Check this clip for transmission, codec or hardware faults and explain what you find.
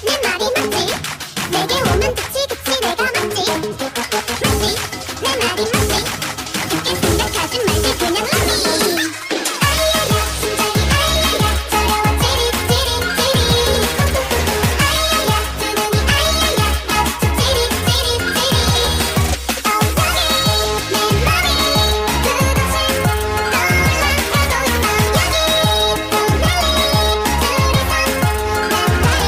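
No transmission, codec or hardware faults can be heard anywhere in the recording, so the signal arrives intact and continuous, with nothing in it that points to a problem along the chain.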